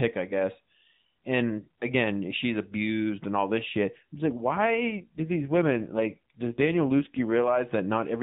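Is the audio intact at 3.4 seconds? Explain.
Yes, the speech at 3.4 seconds is intact, carried through the AMR narrowband mobile codec at 12.2 kbps with only light coding colour.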